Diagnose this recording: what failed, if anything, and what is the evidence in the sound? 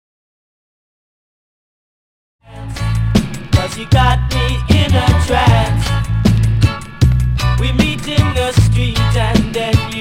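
Nothing in the recording points to a failure at any stage of the chain. The sound fades in smoothly from around two and a half seconds to full level at 3.14 s, with no click or hard edge, as a deliberate edit would.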